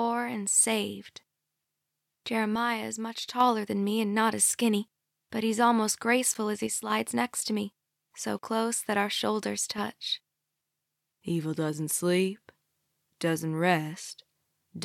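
At 2.55 s the sound suddenly drops about 6 dB until 3.40 s, and it does the same from 6.67 to 6.90 s and again from 9.72 to 9.78 s. That's likely one channel dropping out: once the two channels are summed to mono, anything they share loses half its level, and anything only in the missing side vanishes. Separately, at 6.34 s and again at 12.37 s, there's a hard-edged hole of silence, about 10 ms the first time and 6 ms the second. That's a gap between stream segments. The timestamps of neighbouring chunks don't quite meet, so the player pads the gap with silence. The roughly 6 s spacing fits 6-second segments.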